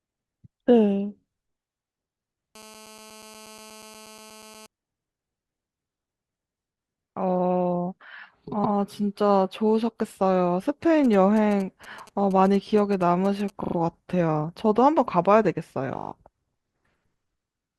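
From 2.55 to 4.66 s there's GSM phone buzz: a hard, raspy drone at about 217 Hz, packed with harmonics and sitting about 24 dB under the speech. A 2G handset nearby was in a call, pulsing its transmitter 217 times a second, and something in the audio chain rectified those radio bursts into sound. Since it's a call, the buzz holds steady rather than flickering, and it has nothing to do with the speech itself.

At 8.63 s comes the first case of repeated frames. A 120 ms stretch of the compressed stream got decoded twice, so you hear that slice of speech stutter once. The length points to a run of roughly six frames being resent or rewritten, and it adds 120 ms to the clip.

From 11.04 to 13.50 s the phone is back, this time with GSM signalling bursts. Instead of a continuous drone you get a galloping dit-dit-dit of short 217 Hz buzzes, well down under the speech. That's a handset sending only occasional groups of bursts, the kind of chatter before a call or text lands, and it's picked up and rectified the same way.

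Repeated frames show up twice more, at 13.63 and 15.97 s. Each time a 40 ms block plays three extra times, giving a quick machine-gun stutter, consistent with a couple of frames looping. Each one stretches the audio by 120 ms.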